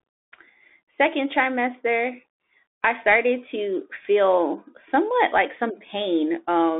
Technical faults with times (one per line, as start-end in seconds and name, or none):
0.00-6.79 Bluetooth CVSD headset codec